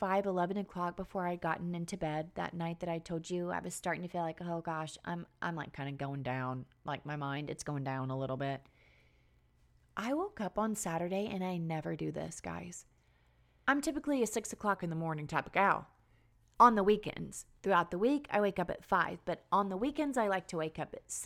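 At 3.27 s, after "night that I told", the speech abruptly runs about 6% fast and rises roughly a semitone. It snaps back at 5.66 s, before "kind of going down". The same jump recurs from 7.37 to 7.99 s, after "going down like my". From 14.76 to 16.53 s, after "I'm typically a six", it runs about 6% slow and drops a semitone. This is a drift correction step. Clock-matching software likely changed the playback rate in one step to correct its buffer level.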